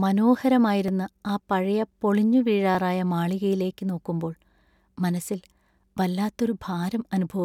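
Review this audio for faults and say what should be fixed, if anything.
Two devices likely running on separate, mismatched clocks, off by a few hundred ppm, cause clock drift buffer slips. Every 1.86 s the buffer drops or repeats a few dozen samples, heard as about four regular clicks in the speech from 0.88 s to 6.47 s. Locking both devices to one shared word clock, or adding adaptive resampling between them, would prevent it.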